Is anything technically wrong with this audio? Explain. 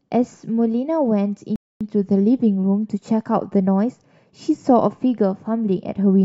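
Yes. A rebuffering stall occurs from 1.56 to 1.81 s. The player used up all the speech it had downloaded, halted playback, and waited for more data before continuing. The speech drops abruptly into silence, then picks up again at exactly the point where it broke off. No audio is skipped or repeated. The gap is pure added time, about 250 ms, that lengthens the clip without removing any content.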